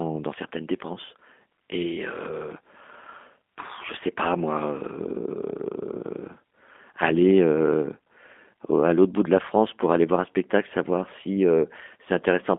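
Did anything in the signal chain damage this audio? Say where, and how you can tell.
Yes, the codec: G.729 coding throughout rebuilds the speech from a vocal tract filter and sparse pulses, confining it to 200 Hz–3.5 kHz with plainly synthetic roughness.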